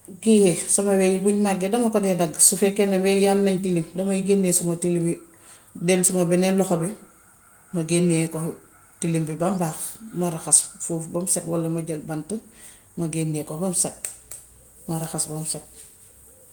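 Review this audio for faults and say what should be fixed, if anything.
Nothing stood out on listening to this speech recording, so there is nothing to fix.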